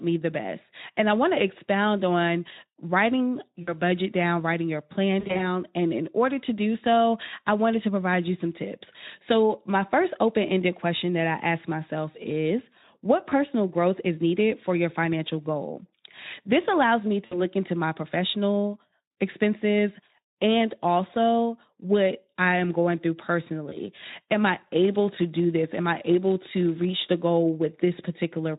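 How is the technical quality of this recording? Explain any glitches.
The recording has two kinds of glitch: brief dropouts scattered through the speech and a buzzy stretch near the end. Underneath, the speech carries the light hoarseness of a mid-rate Speex codec, around 15 kbps.

VoIP packet loss concealed by the speech codec: At 3.61–3.74 s, 5.19–5.45 s (after "down writing your plan"), 13.29–13.33 s, 17.25–17.42 s (after "allows me") and 23.69–23.78 s, the sound briefly smears into a buzzy, fading tone. Lost packets, 20 to 120 ms' worth, were filled in by the decoder extrapolating its last frame.

Block size mismatch (padded): From 24.42 to 27.23 s, a roughly 100 Hz buzz rides over the speech, which runs about 0.4% slow. One stage writes short blocks that the next pads with silence.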